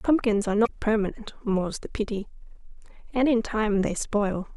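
A brief glitch cuts into the speech from 0.62 to 0.70 s. This is damaged data in a compressed stream: corrupted bytes in that stretch left the decoder misreading its frames and losing sync until it found the next valid frame header.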